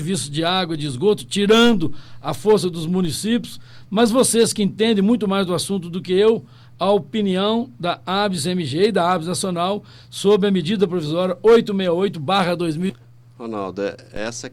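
At 3.05 s the waveform's zero line jumps, a DC step, and the offset holds until 14.17 s; each shift lands as a low thump beneath the continuing sound. From 12.89 to 12.95 s the audio jumps ahead with a small blip, likely a stream segment skipped after it failed to load.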